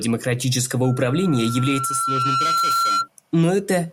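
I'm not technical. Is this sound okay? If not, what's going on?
No, loudspeaker feedback squeal runs from 0.84 to 3.08 s: a single 1.4 kHz tone swells over about a second and a half until it's as loud as the speech. The microphone is picking up its own loudspeaker, and that pitch keeps feeding on itself.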